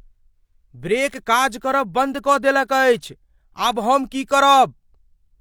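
Nothing in this speech recording stood out as a technical fault on listening.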